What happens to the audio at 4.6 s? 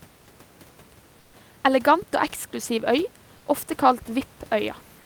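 Nothing goes wrong at 4.6 s; the speech carries on intact there, with only the room's background noise sitting about 32 dB below it.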